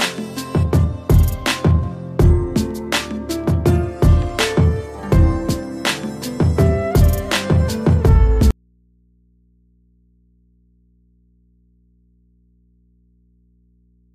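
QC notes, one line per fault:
8.51 s to end: audio dropout to a faint residue. The signal feed was likely lost while the downstream path stayed live, so the sound cuts off abruptly and only mains hum from the open input remains, roughly 40 dB below the signal.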